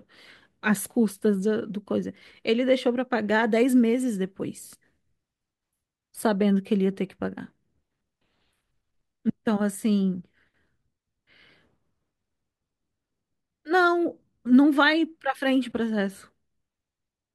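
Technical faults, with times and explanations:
15.46 to 16.29 s, block size mismatch (truncated). One stage hands over blocks longer than the next stage takes in, and each block's tail is dropped. The repeated cut makes a buzz at about 43 Hz, which fits 1024-sample blocks. Speed and pitch stay essentially normal.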